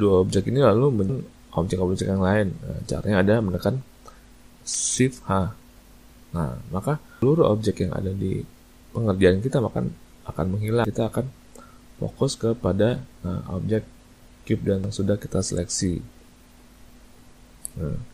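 Short chirps and blips break into the audio at 1.09 s, 7.22 s, 10.85 s and 14.84 s, with a longer squawk from 4.74 to 4.81 s. This is damaged data in a compressed stream: corrupted bytes make the decoder misread frames and lose sync until it finds the next valid frame header.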